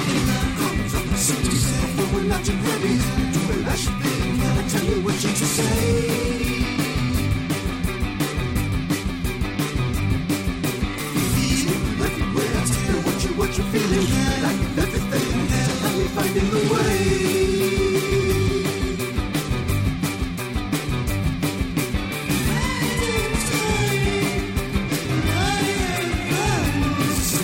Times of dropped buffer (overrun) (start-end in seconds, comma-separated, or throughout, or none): 13.08, 25.60